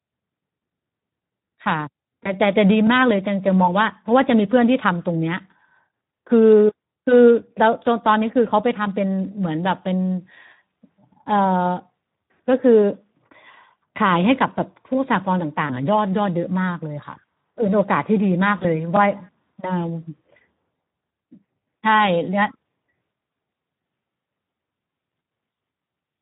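Throughout, Speex codec damage is plainly audible: a hoarse, noisy speech texture consistent with roughly 11 kbps, shown on a spectrogram as smeared, grainy harmonics. VoIP packet loss concealed by the speech codec appears at 2.23–2.36, 15.67–15.74 and 18.57–18.65 s. Each gap is filled with a fading extrapolation, which would show as a waveform dip and blurred spectrogram columns.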